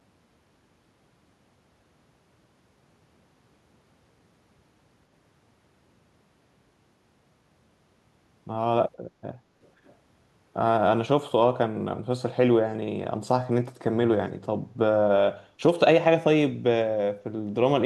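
Echo leak in this speech at 9.63–9.69 s and 9.85–9.95 s: very faint scraps return 499 ms late, likely loudspeaker pickup an echo canceller failed to remove.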